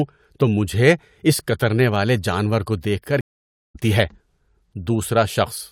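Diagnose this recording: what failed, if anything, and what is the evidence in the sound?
The failure is a stream reconnect at the network stage. At 3.21 s the speech stops dead for about 0.54 s, until 3.76 s. When it returns, it does not pick up where it left off but roughly 0.4 s further on, so that stretch of speech is simply missing. That skip is the telltale: a buffer underrun or packet-loss concealment would resume at the same point. Here the connection dropped, the player rejoined the live stream and started a fresh decoder at the current position.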